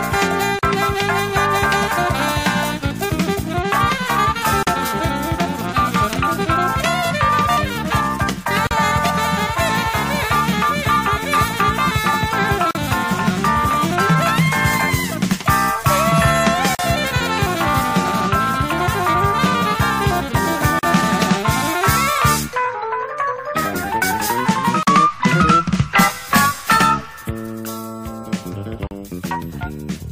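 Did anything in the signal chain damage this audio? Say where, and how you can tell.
Yes: a gap at a join of encoded pieces, at the codec stage. Silences of about 40 ms open every 4.0 s, at 0.59, 4.63, 8.67, 12.71, 16.75, 20.79, 24.83 and 28.87 s. The sound drops out, its edges smeared by the codec, and resumes where it stopped. Separately encoded pieces were butted together untrimmed, leaving encoder delay and final-frame padding as silence.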